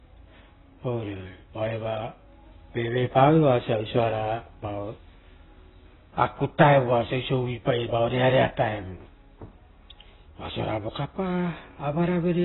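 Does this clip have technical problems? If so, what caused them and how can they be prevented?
Yes. The speech carries heavy AAC compression artefacts throughout: nothing is present above about 3.9 kHz, so the audio sounds dull, and sibilants and sustained vowels take on a warbling, smeared texture. The likely cause is AAC-LC encoding at a very low bitrate, consistent with around 16 kbps, where the encoder drops the upper band and coarsely quantises what remains. To prevent it, encode speech at 64 kbps or higher, or keep a lossless master.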